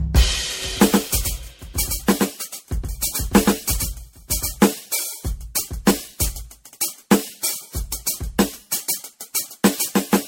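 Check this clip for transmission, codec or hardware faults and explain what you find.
Two faults are audible in this music clip: generation loss throughout, and a doubled audio track early on.

Generation loss runs the whole length. The music sounds swirly, hollow and smeared, with blurred attacks, most likely from around seven successive lossy encodes, consistent with MP3 at about 64 kbit/s. Each pass requantises on a shifted frame grid, so the damage accumulates. A spectrogram shows a hard ceiling near 16.6 kHz and patchy, flickering holes below it.

A doubled audio track sits from 0.62 s to 4.66 s. A second full-band copy, about 5 dB quieter, trails the original by roughly 150 ms, likely from a slower parallel capture path. It sounds like a dry, flat slapback with no room colour, appearing and vanishing abruptly. The waveform shows each transient repeated about 150 ms later.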